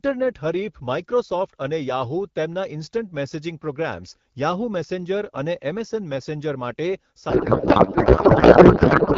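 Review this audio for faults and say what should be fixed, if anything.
A codec payload misread takes over from 7.29 s to the end of the clip at 9.17 s. The speech gives way to garbled noise and warbling tones that barely track it. This points to octet-aligned AMR frames being read as bandwidth-efficient, so the decoder unpacks the bits with its fields shifted. On a spectrogram the harmonic and formant structure breaks into smeared broadband texture. The waveform loses its syllable envelope. To prevent it, both ends should negotiate the same octet-align setting in the session description.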